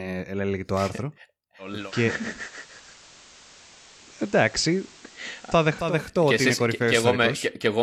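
At 1.58 s, just before "ότι είναι", the speech blends from digital radio to analogue FM over 350 ms: hiss appears about 25 dB down, and the level moves about 1 dB. Unlike a hard dropout, it fades back at 6.03 s.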